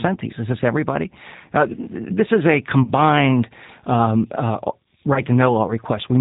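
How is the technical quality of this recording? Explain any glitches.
The recording is clearly degraded. The whole clip carries plain codec damage, and two short dropouts break the speech.

The G.729 codec shapes everything from start to finish. The sound is band-limited, with nothing above 4 kHz, which gives a dull, narrow telephone tone. The speech is rebuilt from a vocal tract model, a pitch predictor and a few pulses per frame, not stored as a waveform. That is why it sounds slightly rough and synthetic. The character fits a G.729A stream at about 8 kbit/s.

VoIP packet loss concealed by the speech codec appears twice. The first gap runs from 2.83 to 2.91 s, right after "this is a". About 40 ms of audio is missing, which points to two lost packets in a row. The second runs from 5.14 to 5.21 s, after "um uh", and covers about 20 ms, which fits a single lost packet. In both places the decoder fills the hole by repeating its last pitch and filter state at falling gain. 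The result is a brief stretched sound, a buzzy tone or coloured noise, that fades. Each frame depends on the one before, so the speech stays weak or distorted for a moment after real audio returns.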